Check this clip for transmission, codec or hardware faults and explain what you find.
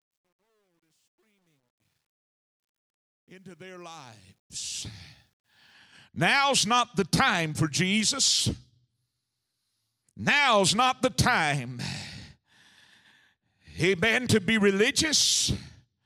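One fault is present, in the opening fade-in of the speech. Truncation distortion on a fade runs from 0.0 to 5.73 s. The fade stage drops low-order bits without dither, which fits a word length of about 11 bits, so the quietest part, 0.0 to 3.63 s, collapses into coarse steps and sounds gritty until the level rises.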